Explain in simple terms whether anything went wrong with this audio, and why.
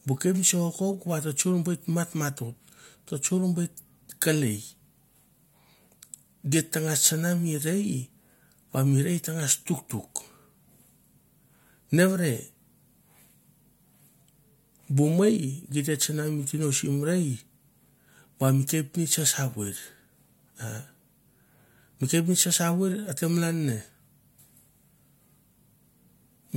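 Nothing went wrong here, as far as the ear can tell: the speech comes across steady and intact, with no dropouts, glitches or other faults anywhere in it.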